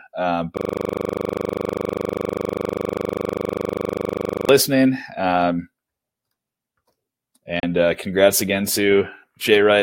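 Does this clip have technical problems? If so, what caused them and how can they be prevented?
Yes, two. From 0.57 to 4.49 s there's a system hang loop: the driver froze and the hardware kept replaying one 40 ms buffer, giving a steady 25 Hz buzz. Fixing driver stalls and adding a watchdog that mutes output on a hang would prevent it. Around 7.6 s a digital broadcast dropout mutes about 32 ms, which fits one corrupted frame being discarded. Stronger reception or better error correction would avoid it.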